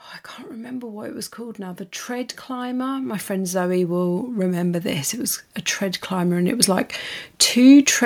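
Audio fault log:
0.49–6.95 s, automatic gain rising: just after "I can't", the level climbs steadily by about 14 dB over roughly six and a half seconds. The automatic gain control has judged the input too quiet and is ramping its gain up slowly rather than stepping it, so the speech and the background noise floor swell together at the same rate. That shared rise marks it as gain control.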